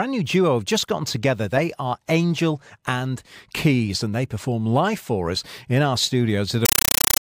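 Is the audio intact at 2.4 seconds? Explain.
Yes, the audio is intact at 2.4 seconds, with no dropout, click, distortion or other fault at that moment.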